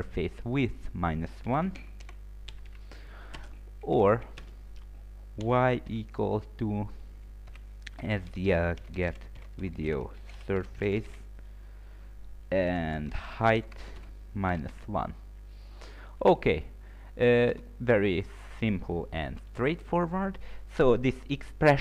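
The audio has two abrupt skips, at 3.07 s and 9.37 s, each a small jump forward in the sound. The likely cause is a dropped buffer (overrun): samples were overwritten before being read, so a short stretch vanished, about 20 ms at the first point and a few milliseconds at the second, and the remaining edges were spliced together. Unlike an underrun dropout, no silent gap appears; the sound simply skips ahead.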